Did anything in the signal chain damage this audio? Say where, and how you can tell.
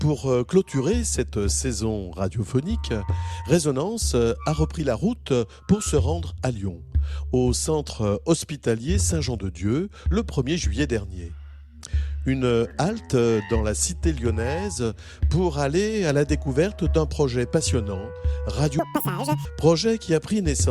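Yes. From 18.79 to 19.45 s the audio was read two samples at a time, a sample-format or channel-count mismatch: pairs of samples were taken as one frame, so the sound runs at double speed and an octave higher. On a spectrogram, harmonics jump upward; the waveform looks compressed in time.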